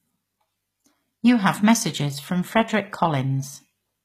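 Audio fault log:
Throughout: HE-AAC compression. S sounds turn gritty and metallic, with nothing above 14.9 kHz, likely from treble rebuilt out of copied lower bands at about 20 kbps.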